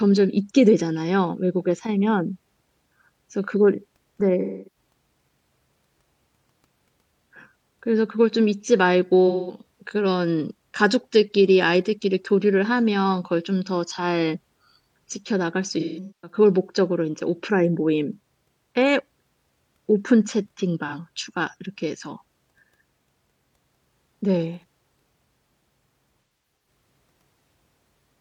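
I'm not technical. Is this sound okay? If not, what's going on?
No. The speech has AAC frame loss with concealment: small chunks of audio went missing and the player guessed to fill them, leaving brief smeared, fizzy patches at 4.41–4.77, 9.28–9.63, 15.80–16.37, 20.87–20.94 and 26.22–26.66 seconds.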